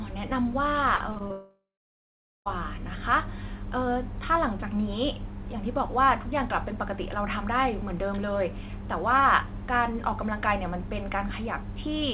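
From 0.96 to 1.32 s there is repeated packet loss, heard as a robotic, choppy sound. Four short holes, none longer than 40 ms, together take out about 120 ms, roughly a third of that span. Each one is patched by stretching the preceding sound, so the audio turns choppy and stuttering. Unlike a single dropout, the sound keeps returning between the brief gaps rather than stopping outright.

The sound then breaks off completely from 1.32 to 2.48 s, a gap of about 1.14 s and most likely a long network dropout. The last sound is carried on as a fading buzz or hiss, then gives way to about 0.81 s of silence before the audio resumes with that stretch gone. This is one unbroken hole, not a string of short ones, so it sounds like a cut-out, not robotic chatter. Throughout, the audio has nothing above 4 kHz, which fits a 64 kbps G.711 call path.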